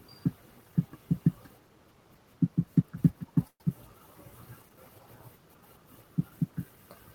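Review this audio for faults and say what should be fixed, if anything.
Packets were likely held up in transit, draining the jitter buffer. From 3.47 to 3.61 s, this call audio freeze stretches the last sound into a fading buzz ending in 40 ms of silence; speech then resumes intact, running 125 ms later. An adaptive jitter buffer and prioritised, steadier network delivery would prevent it.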